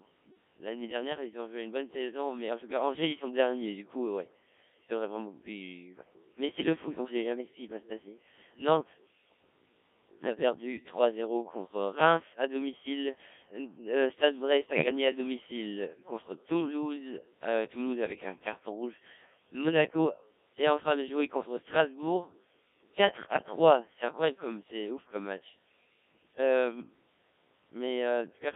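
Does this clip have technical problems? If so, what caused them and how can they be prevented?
Yes. The Codec 2 vocoder is audible throughout the clip: the speech sounds robotic and buzzy, and the band runs only from about 250 Hz to 3.6 kHz, with the voice coded at 1.3 kbit/s. At that rate only pitch, voicing, energy and a coarse spectral envelope are transmitted, and the decoder rebuilds the voice from sine waves, so the original waveform and any natural texture are gone. To prevent this, use a higher-rate codec or a wideband channel whenever the link has the capacity.

Bit errors on digital voice radio occur from 14.70 to 14.86 s, where the synthetic voice briefly lurches in pitch, level and timbre and breaks into warbling gibberish. At a bit error rate of roughly 3 percent, corrupted bits land in parameters that each control an entire frame, and the burst is long enough to hit a few consecutive frames. 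To prevent this, keep the radio within solid coverage or add stronger forward error correction to protect the vocoder bits.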